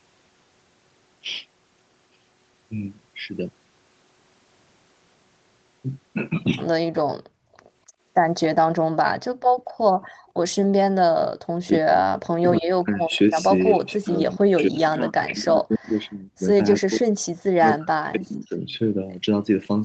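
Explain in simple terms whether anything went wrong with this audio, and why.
Three problems are audible, all tied to the echo canceller, the part of a call system that stops the far side hearing itself.

Background gated by the echo canceller: between 7.26 and 7.99 s, 9.31 and 10.27 s, and 11.35 and 11.40 s, the room sound around the speech drops away sharply and then returns. The canceller clamped the microphone down hard while the loudspeaker was playing, for roughly half a second in the first two cases and a brief flicker in the third.

Echo leak: from 10.06 to 10.32 s, and briefly at 13.12 to 13.18 s and 13.86 to 13.92 s, a very faint second copy of the sound trails the original by about 0.28 s. This is likely loudspeaker sound that reached the microphone and was not fully removed, so it travelled back down the line as a delayed, quiet repeat.

Speech suppressed in double talk: from 11.68 to 18.6 s the speech repeatedly sinks, sometimes almost to silence, for about five seconds in total. 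The likely cause is both sides talking at once. The canceller could not tell the local talker from the incoming echo, so it turned everything down together.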